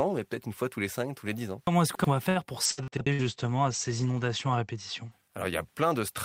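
From 1.67 to 2.04 s, chunks out of order: a roughly 93 ms chunk lands three chunks late, so the sound jumbles at the hard joins, but unlike a dropout nothing goes missing.

From 2.29 to 3.24 s, repeated packet loss gives a robotic, choppy texture. Five gaps, the longest 62 ms, are each filled by stretching the previous sound. Unlike a single loss, the holes keep coming, and about a third of the stretch is patched.

From 2.66 to 5.17 s, a call bitrate drop from 32 to 14 kbps narrows the bandwidth from 20 kHz to 8 kHz. The sound turns muffled and watery for about 2 s rather than breaking up.

Inside that stretch, from 2.88 to 3.07 s, a second out-of-order chunk arrives one chunk late, adding another brief scramble.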